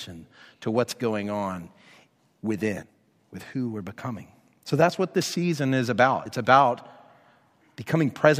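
At 2.81 s, just before "with who we're becoming", and again from 6.23 to 6.27 s, after "what this season is", damaged data in the compressed stream throws the decoder out of sync, producing a brief chirp, squawk, click or short hole.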